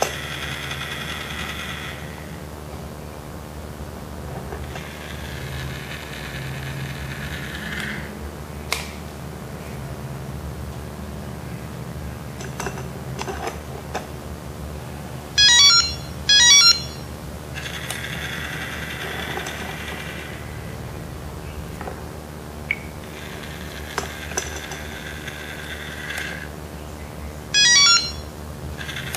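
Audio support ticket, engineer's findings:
Video or display buzz, whole clip. Steady 75 Hz buzz with hash above it, fairly strong, roughly 10 dB under the audio. Probable component: monitor or video cable coupling into the audio path; 75 Hz matches the display's field rate.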